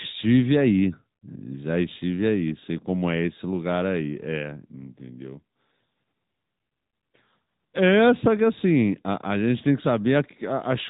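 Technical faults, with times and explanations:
Throughout, AMR narrowband mobile codec: the speech has the boxed-in sound of a 2G or 3G phone call. Nothing reaches above 3.8 kHz, so consonants lose their crispness and sibilants sound dull. The codec rebuilds the voice from a vocal-tract model excited by sparse pulses, frame by frame. That gives a plainly audible buzzy, synthetic edge, which fits one of the higher AMR-NB modes, around 10 kbps.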